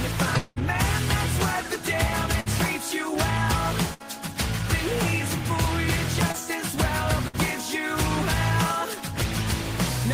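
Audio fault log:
0.37 to 0.58 s, long network dropout: The sound stops moving forward for about 190 ms. The last sound is stretched into a held buzz or hiss that fades, with no true silence. When the audio returns, about 180 ms of material is gone. The likely cause is that nothing arrived over the network for that stretch, so the receiver could only extend what it already had and then skip ahead.
2.40 to 2.48 s, 3.94 to 4.02 s and 7.28 to 7.35 s, burst of packet loss: Each event is a gap of about 60 ms, with 56 ms in the first. The receiver fills it by continuing the last sound and lowering its level. A voiced sound becomes a short buzz and any other sound becomes a fading hiss. Each time, 60 ms of audio is missing, because a run of packets came too late or not at all.
6.32 to 6.36 s, short concealed packet loss: A brief smear or wobble lasting about 18 ms. About 20 ms of audio never reached the decoder in time. 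The receiver continued the last sound, from its pitch if it was voiced or as shaped noise if it was not, then blended back into the real signal. A short sound such as a consonant can vanish in a gap like this.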